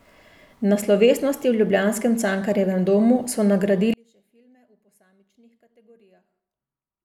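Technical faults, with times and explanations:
3.94–7.05 s, one channel inverted: after "domu so" speech drops about 38 dB to a faint trace, likely polarity cancellation in mono; waveform flattens, spectrogram goes almost blank.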